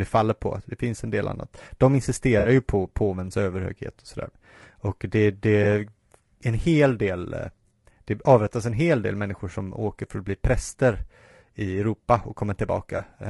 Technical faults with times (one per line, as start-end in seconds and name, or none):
0.00-13.30 low-delay AAC compression
2.39-2.49 AAC frame loss with concealment
5.63-5.66 AAC frame loss with concealment
12.97-13.01 AAC frame loss with concealment